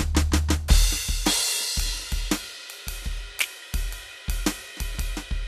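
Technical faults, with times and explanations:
No technical faults can be heard in this music.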